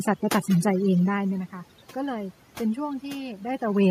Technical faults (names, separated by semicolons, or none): overdone noise removal